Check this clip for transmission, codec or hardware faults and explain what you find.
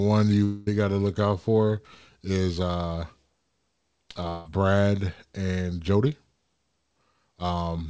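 Two gaps in transmission stand out, both heard as the likely long network dropout, carried over a G.722 call path whose sound stops at 8 kHz.

At 0.44 to 0.69 s, just before "got to look out", and again at 4.29 to 4.49 s, the sound smears into a fading buzz for about 0.2 s and then resumes with that stretch missing. The receiver is filling lost packets by extending the last sound. Unlike a brief packet-loss click or a codec glitch, each smear lasts a couple of tenths of a second, and nothing comes back to replace the missing audio.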